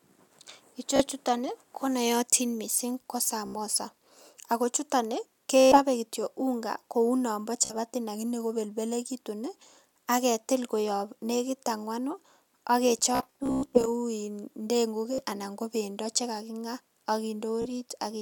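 Bluetooth stutter breaks the speech at 0.96–1.02 s, 3.46–3.55 s after "konootin missing ko", 5.60–5.79 s, 7.65–7.74 s between "unga kou nombo" and "lakini kobelbelekitun", 13.15–13.88 s, 15.13–15.23 s before "anan ko bendo chekakinga", and 17.62–17.67 s. Late or lost radio packets left the receiver replaying its last slice of roughly 15 ms, so each break is a rapid buzzing repeat rather than a silent dropout. Speech resumes further on, as if it had kept playing. The longest bursts run about 120 ms, and the 13.15 s stretch is a scattered machine-gun rattle.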